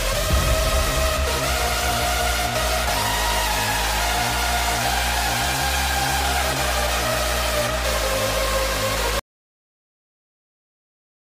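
At 9.19 s the sound stops abruptly in mid-flow and never returns. The last 2.1 s, running to the end, are silent. This is an audio dropout to silence, likely from the input being lost, through a disconnection, failed link or mute, while recording carried on writing silence. What separates it from a natural pause or a fade is that no room tone or noise floor remains. The cut is instant and the gap is completely empty.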